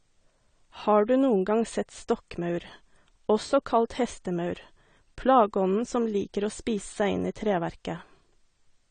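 From start to finish the speech has nothing above about 9 kHz, and the damage is plainly audible: a dull top end with a watery, swirling texture on sustained sounds and fizz on sibilants. That points to AAC compression, likely AAC-LC at a rate fitting about 32 kbps, where the encoder lowers its cut-off and starves bands of bits. A simple low-pass filter would dull the sound without that shifting, metallic warble.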